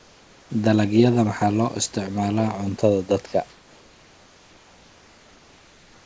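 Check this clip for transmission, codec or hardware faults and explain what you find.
One transmission fault stands out, over a speech path with no content above 8 kHz, which fits G.722. Comfort noise in place of the background runs from 0.00 to 0.50 s and from 3.50 s after "cuntada dadka" to the end. During pauses the room background turns into a steady, featureless hiss, about 4 dB and 3 dB quieter, most likely because the receiver fills silences with synthetic noise while the sender stops transmitting.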